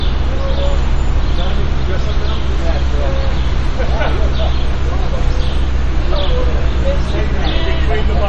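Throughout the clip the audio has likely been squeezed through MP3 compression at a low bitrate, with a damage level that fits something around 40 kbps. Short of bits, the encoder has cut the treble at about 9.6 kHz, leaving nothing above it, and weak frequency lines drop in and out between frames. The result is a dull top end with a plainly audible watery, swirling texture, metallic chirps on bright, noisy parts, and softened attacks.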